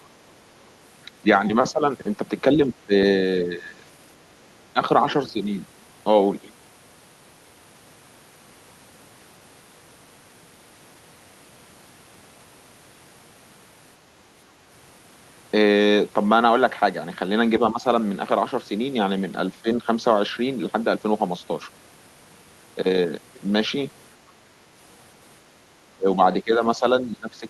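An echo canceller likely mistook the talker for loudspeaker echo while both sides spoke, causing speech suppressed in double talk. The speech briefly dips by roughly 5 to 15 dB at 1.22, 1.71, 2.54, 3.44, 4.73 and 17.71 s, then again from 25.95 s to the end.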